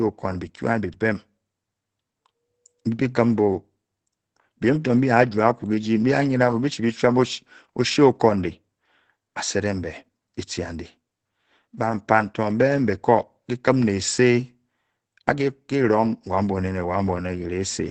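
Throughout the speech, heavy Opus compression is the likely cause: a starved bit budget, which fits a rate around 12 kbps, drives the encoder into its speech-oriented mode. Nothing survives above 8.8 kHz, so the voice sounds muffled and hoarse.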